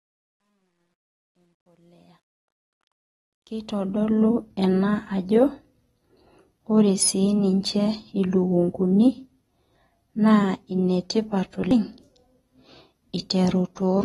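From the opening to 4.31 s, the speech fades in with truncation distortion on the fade. The gain stage keeps too few bits and adds no dither, which fits roughly 11-bit resolution. The quietest stretch, 0.0 to 2.35 s, sounds gritty, and a waveform view shows coarse square steps.

Throughout the 14 s clip, the speech is dull and smeared with a fizzy, warbling texture on sibilants, likely from AAC compression at a bitrate around 32 kbps. A spectrogram shows nothing above 12.4 kHz.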